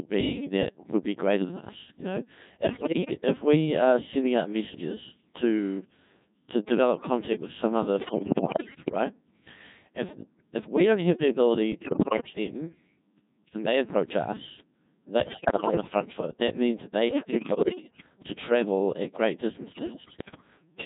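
The whole thing runs through a Codec 2 vocoder, rebuilding speech from pitch and spectral outlines, so it's heavily robotic and buzzy, which fits the 1.6 kbit/s mode. Then bit errors on digital voice radio hit at 2.64–3.14 s (just before "if we are sending"), 8.00–8.92 s (after "contact with some other"), 11.72–12.3 s, 15.2–15.9 s, 17.08–18.06 s and 19.72–20.5 s (after "to travel at great"). Roughly one bit in seven to ten gets flipped, scrambling pitch, level and tone into warbling, bleeping gibberish.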